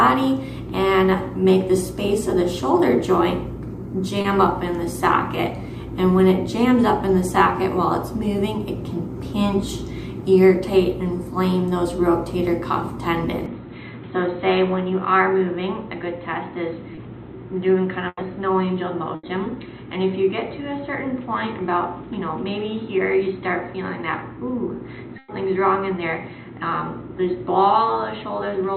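At 4.21 to 4.25 s, a short concealed packet loss drops 30 ms of the stream before it reaches the decoder. The receiver bridges the hole by extending the preceding sound and blending back, so the gap is heard as a brief smear or wobble rather than a dropout.

From 13.46 s onward, the input likely switched to a poorer device. Everything above 4.1 kHz disappears, the level falls by a few decibels, and a faint new noise floor sits well below the signal, so the sound turns dull and boxy with no silence at the change.

At 16.95 to 16.98 s, another short concealed packet loss replaces 20 ms with synthesised continuation, giving a tiny wobble in the already narrowed sound.

Bursts of packet loss follow at 18.08 to 18.18 s (90 ms), 19.15 to 19.24 s (80 ms) and 25.18 to 25.29 s (100 ms). Each time, consecutive data failed to arrive, and the receiver stretched the last sound while fading it down. The result is a held buzz or fading hiss, after which the audio resumes further on with that stretch missing.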